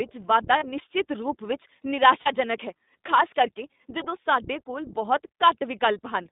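Speech carried over the iLBC codec, band-limited to roughly 200 Hz to 3.7 kHz, with the slightly rough, synthetic texture that fits iLBC's 15.2 kbps mode, since each short frame's excitation is coded independently and nothing above 4 kHz survives. Lost iLBC frames appear at 0.58–0.65 s just before "ਰੂਪ ਵਿੱਚ", at 2.22–2.28 s just after "ਰੂਪ ਵਿੱਚ", and at 3.98–4.01 s before "ਸਾਡੇ ਕੋਲ ਬਹੁਤ". The decoder fills each gap with a repeated pitch cycle plus noise, heard as a brief buzzy held vowel. The gaps fit two, two and one lost 20 ms frames, and the speech recovers immediately after each.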